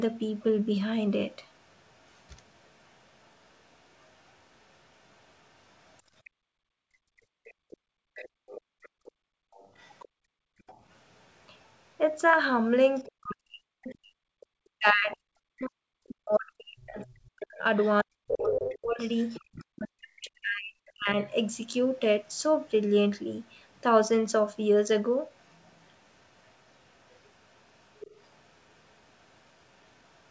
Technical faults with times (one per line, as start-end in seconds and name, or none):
1.71-14.46 other side's voice leaking through
6.30-10.65 background gated by the echo canceller
13.06-21.17 speech suppressed in double talk
16.34-20.20 other side's voice leaking through
21.98-22.71 other side's voice leaking through
25.37-30.31 other side's voice leaking through